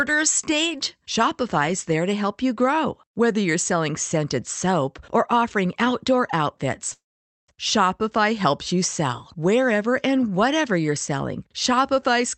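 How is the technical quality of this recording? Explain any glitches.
The recording has one clear glitch, a call audio freeze. It plays over a call path whose top end stops near 8 kHz, which fits an Opus wideband link.

From 6.93 to 7.50 s, right after "or offering outdoor outfits", packets were likely held up in transit and the jitter buffer ran dry. The receiver filled about 0.55 s by stretching the last sound into a brief fading buzz or hiss, then near-silence for most of that stretch. Playback resumes where it stopped, with nothing lost, just everything after arriving about 0.55 s later.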